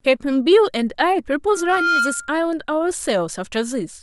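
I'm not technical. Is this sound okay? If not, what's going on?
No. There's loudspeaker feedback squeal from 1.52 to 2.45 s: a microphone picked up its own loudspeaker, and one pitch, around 1.4 kHz, kept looping and growing. It swells over roughly 0.4 seconds into a whistle about as loud as the speech.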